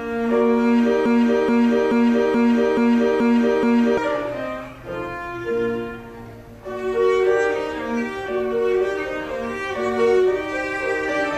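From 1.06 s to 3.98 s the sound catches on a single fragment of about 0.43 s and plays it back to back, the same sliver repeating exactly seven times with no variation between passes. This is a broken-record loop: the player, encoder or stream likely stalled and kept re-sending the last piece it held. Whatever audio belonged to those three seconds never arrives; playback simply resumes past the gap.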